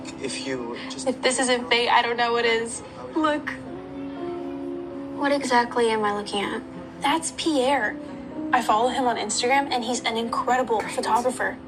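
A drift correction step runs from 3.76 to 5.42 s: playback suddenly speeds up by 5.96% and the pitch rises a full semitone (100 cents) before snapping back. A second runs from 8.08 to 9.50 s, slowing by 5.96% and dropping 106 cents. Each is likely clock-matching software changing the rate in one jump to refill or drain its buffer, so speed and pitch move together, heard as an abrupt detuning.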